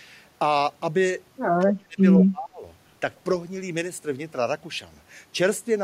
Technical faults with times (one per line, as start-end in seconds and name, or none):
1.59-2.63 speech suppressed in double talk